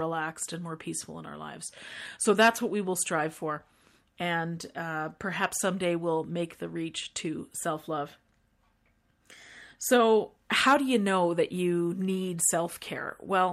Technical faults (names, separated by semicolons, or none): none